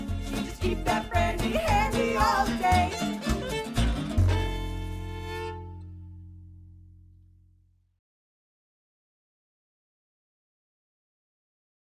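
Nothing goes wrong anywhere in this audio; there's no fault to point out at any moment.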